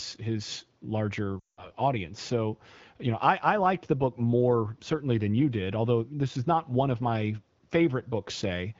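After "his larger", at 1.40 to 1.71 s, lost AMR speech frames occur. The decoder fades the last sound to near silence within two frames, then resumes roughly.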